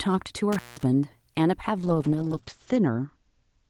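A speech recording with two faults. Between 0.52 and 0.83 s an intermittent contact, a loose cable or plug, breaks the connection for about 180 ms, so the speech drops out with crackle at either edge and faint hiss fills the gap. From 1.78 s to the end, a call bitrate drop makes the encoder code far more coarsely, consistent with a fall from around 32 kbps to 8 kbps. The audio bandwidth narrows from 20 kHz to 8 kHz, and the speech turns muffled and rough, worst for about a second.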